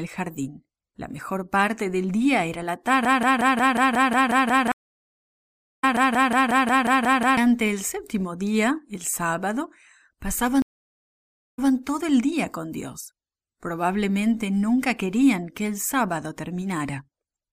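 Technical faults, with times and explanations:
3.05–7.37 s, broken-record loop: just after "del día era la", a 0.18 s fragment repeats exactly, back to back, 24 times until "el séptimo día el", likely because the player stalled and kept resending its last buffered piece. Unlike a dropout, there is no gap: the same snippet plays over and over, and the audio meant for that stretch is lost.
4.72–5.84 s and 10.62–11.72 s, stream reconnect: after "del día era la" there is about 1.1 s of silence, and the audio resumes roughly a second further on. Before "todo el día con" there is 0.94 s of silence, and playback resumes 0.16 s earlier, repeating a short slice. Unlike the loop, each break is true silence followed by a fresh decoder starting mid-stream.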